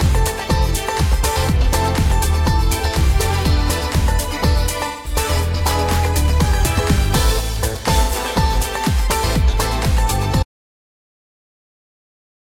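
At 4.87 to 5.15 s and again at 8.03 to 8.14 s, AAC frame loss with concealment leaves smeared, noisy patches. About 170 ms and 85 ms of data went missing, consistent with four and two lost frames. The decoder filled each gap by extrapolating the last good spectrum. From 10.43 s to the end, the audio dropout to silence cuts the sound to silence with no room tone, likely because the input was lost while recording continued.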